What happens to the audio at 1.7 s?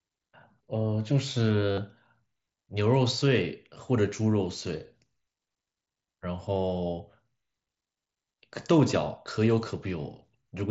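From 1.72 to 1.78 s there is concealed Bluetooth headset packet loss. For about 52 ms, which fits a run of several consecutive lost headset packets, the phone filled the gap by repeating the closest-matching cycle from the last stretch of received speech. The result is a short buzzy, steady tone held at full level, then a slight warble as real audio resumes. A plain dropout would go silent or click instead.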